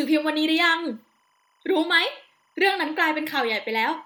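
Speech clip with timecode bleed throughout: linear timecode at 25 frames per second leaks in faintly, a chirping warble switching near 1 and 2 kHz, seen as steady spectrogram lines there.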